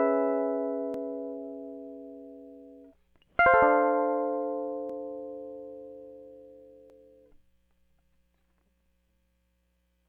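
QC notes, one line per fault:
0.94 s, 4.90 to 4.92 s, 6.90 s, 8.86 s: overlap between stream segments. Overlapping timestamps on the 2-second segments make the player discard 8 to 20 milliseconds of music, producing brief skips.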